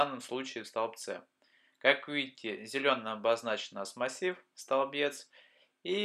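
No technical fault can be heard anywhere in this audio; the signal holds steady without any defect.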